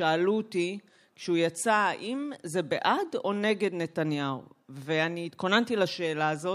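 No technical faults are audible.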